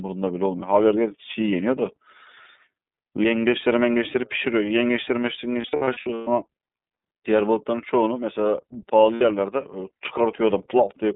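Speech coded through the iLBC codec throughout: the band runs only from about 150 Hz to 3.7 kHz, and the voice is plainly rough and synthetic. Unlike a simple low-pass filter, the grainy excitation texture points to a narrowband VoIP coder, which fits iLBC's 13.33 kbps mode with 30 ms frames. Lost iLBC frames appear between 5.61 and 6.28 s, where about 360 ms of audio is missing, scattered across roughly 660 ms with the longest gap around a tenth of a second. A shorter 60 ms loss occurs at 9.15 to 9.22 s. Rather than silence, each gap holds a buzzy, breathy vowel-like tone, and clean sound returns almost instantly instead of smearing over the following frames.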